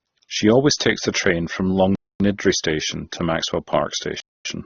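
Speech here is dull with nothing above 6.8 kHz and a layered, smeary texture, which likely comes from transcoding between lossy codecs, something like low-bitrate AAC-LC re-encoded to Opus. There's also a gap between chunks: hard-edged 250 ms silences at 1.95–2.20 s and 4.20–4.45 s, fitting 2-second chunks played back with late starts.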